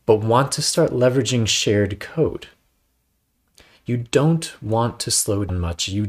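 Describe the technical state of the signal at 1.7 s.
At 1.7 s the speech signal is intact, with no audible technical fault at that moment.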